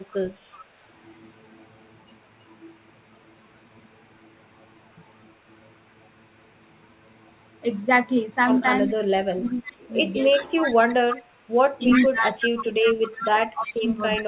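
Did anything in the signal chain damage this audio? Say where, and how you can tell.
Yes, in the call processing. There's an echo leak: a copy of the speech trailing about 0.37 s behind, faint at 0.08–0.65 s and 8.87–8.94 s, then only about 5 dB down at 10.34–10.95 s and 11.9–13.79 s. Likely the far end's echo canceller let its loudspeaker pickup through.

From 8.86 s to the end there's speech suppressed in double talk. The level keeps ducking, by around 25 dB at worst, while that echo overlaps. The likely cause is the canceller failing to separate talker from echo and turning both down, all heard through a G.711 path with nothing above 4 kHz.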